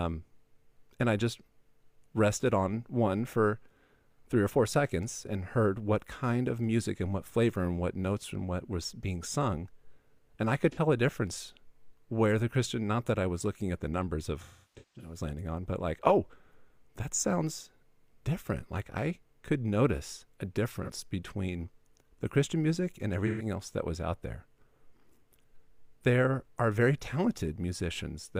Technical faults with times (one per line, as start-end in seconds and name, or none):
10.71-10.78 AAC frame loss with concealment
14.42-15.18 AAC frame loss with concealment
20.83-20.90 AAC frame loss with concealment
23.26-23.45 AAC frame loss with concealment